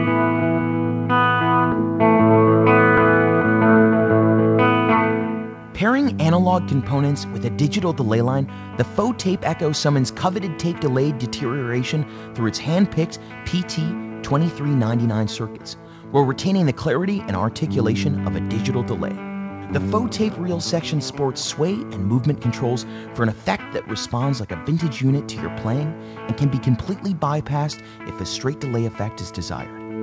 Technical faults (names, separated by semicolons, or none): skip ahead